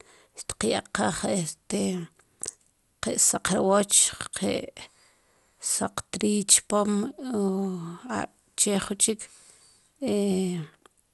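Generation loss runs through the whole speech clip: the sound is swirly and hollow, consonant attacks are smeared, and nothing is present above about 11.9 kHz. This likely comes from the audio being decoded and re-encoded around four times with a lossy codec, with a character that fits MP2 at 96 kbit/s. Each pass quantised the signal again on a shifted frame grid, so the noise built up beyond what one encode at that bitrate would leave.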